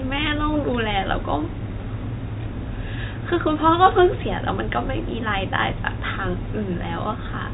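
No technical faults can be heard in this speech, which carries the narrow telephone band of G.711 coding with nothing reaching above about 3.8 kHz.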